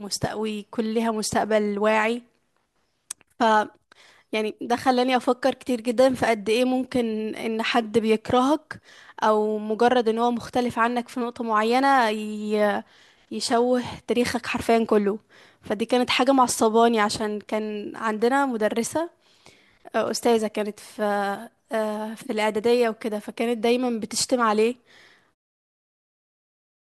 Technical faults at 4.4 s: none

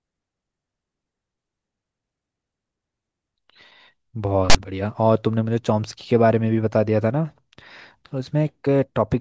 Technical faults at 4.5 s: file tags played as audio

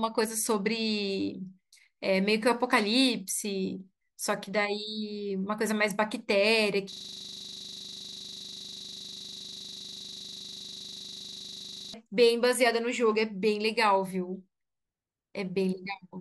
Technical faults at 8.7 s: system hang loop

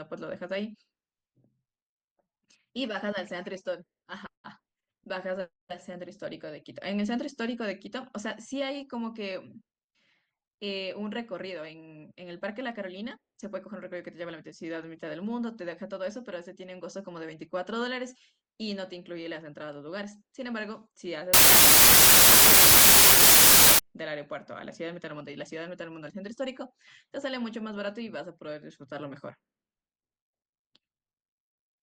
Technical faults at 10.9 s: none

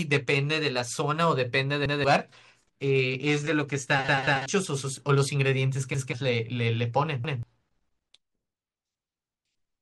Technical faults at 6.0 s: repeated buffer

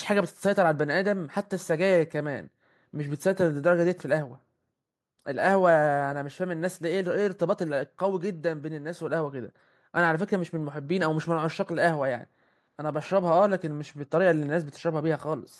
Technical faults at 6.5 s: none

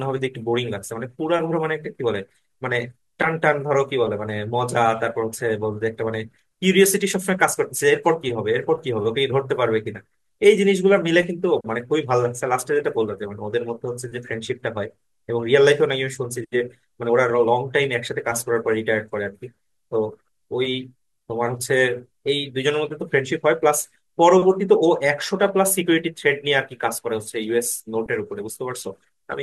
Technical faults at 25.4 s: switching supply whistle

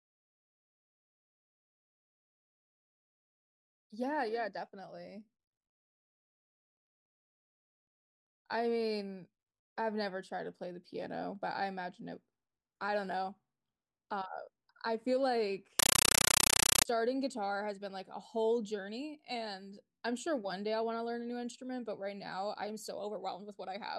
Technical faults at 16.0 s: compressed stream played as audio

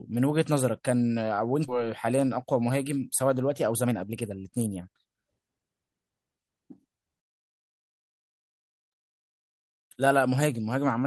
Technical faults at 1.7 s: skip ahead

